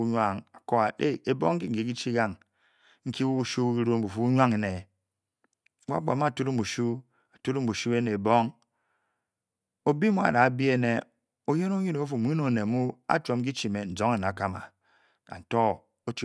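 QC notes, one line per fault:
No faults found on listening to this speech clip.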